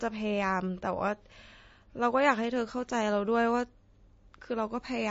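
Throughout the speech, nothing above 7.5 kHz survives, and the remaining sound is plainly watery and swirly, which points to likely MP3 compression at a bitrate around 32 kbps. Weak frequency lines flicker frame to frame, unlike a simple low-pass filter's clean dullness.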